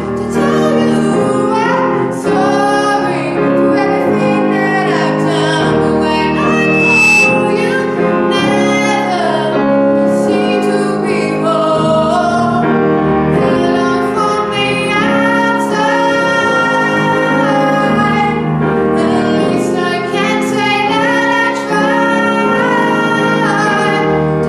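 Loudspeaker feedback squeal appears from 6.16 to 7.68 s: a 2.6 kHz tone swells over about a second to roughly 5 dB above the sound, as the microphone re-amplifies its own loudspeaker.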